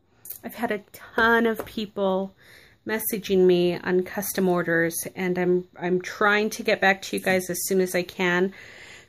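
No technical faults can be heard anywhere in this recording.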